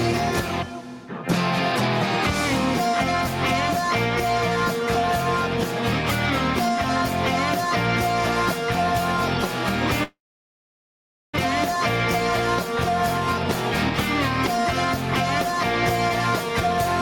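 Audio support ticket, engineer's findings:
Gain pumping, throughout. Gain swings by roughly 5 dB. Loud and soft passages sit too close in level, and the dynamics are audibly squashed. Likely component: input gain set far too high for the mic, with a fast limiter or compressor clamping down on every peak and releasing between them.

Long network dropout, 10.03 s to 11.39 s. The last sound briefly continues as a fading buzz or hiss, then drops to silence for about 1.17 s. Audio resumes at 11.39 s with roughly a second of material missing and the timing shifted by a few tenths of a second. Likely component: the network path, which stalled long enough for the receiver's concealment to run out and its jitter buffer to re-sync.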